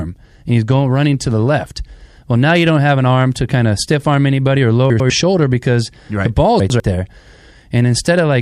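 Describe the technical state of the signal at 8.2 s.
At 8.2 s the speech signal is intact, with no technical fault present at that moment.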